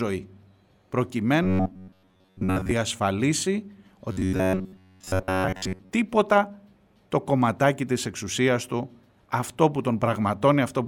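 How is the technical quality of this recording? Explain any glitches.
The speech has two bursts of robotic sound from repeated short buffers, from 1.43 to 2.71 s and from 4.12 to 5.92 s. Here the voice turns into a rigid, metallic buzz near 94 Hz. That is most likely because audio arrived late and a fragment of roughly 10.7 ms was replayed over and over, skipping most of the real signal. Unlike a mains hum, the buzz follows the rhythm of the speech and stops once fresh audio arrives.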